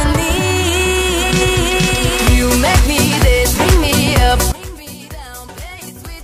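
From 4.52 s to the end at 6.24 s, the sound suddenly collapses to a faint remnant about 19 dB quieter. The likely cause is one channel inverted: with one stereo side's polarity reversed, everything shared between channels cancels when summed, leaving only their difference.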